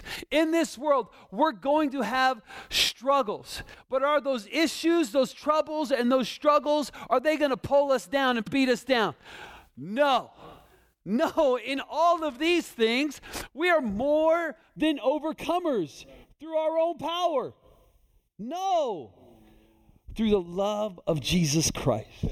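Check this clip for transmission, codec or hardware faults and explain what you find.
Two kinds of fault are present: frames out of order, twice, and channel delay (comb filtering) over the last part of the clip.

Frames out of order, 8.42 to 8.52 s and 21.76 to 21.82 s: adjacent blocks of about 48 ms, then about 24 ms, were decoded with their positions swapped. The result is a brief garbled flutter. Unlike a dropout, nothing goes silent and no time is lost.

Channel delay (comb filtering), from 14.76 s to the end: one channel lags the other by roughly 0.3 ms before the two are summed to mono, so shared content cancels at evenly spaced frequencies, the first near 1.5 kHz. The sound turns hollow and phasey. Unlike a plain low-pass, the upper range remains, cut by repeating notches.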